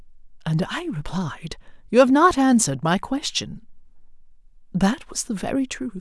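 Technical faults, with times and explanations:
Nothing technical stands out in this speech recording; there's no fault to flag here.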